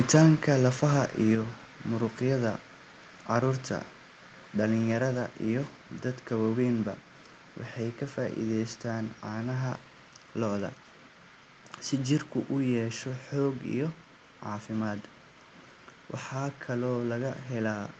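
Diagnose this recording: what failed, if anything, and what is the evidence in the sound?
At 1.35 s the speech and the background noise drop together by about 4 dB in a single step. This is likely a microphone volume stepped down by call processing. Automatic gain control lowered the device's input volume, so everything after it is uniformly quieter. The call codec's roughly 8 kHz top end is unchanged across the step.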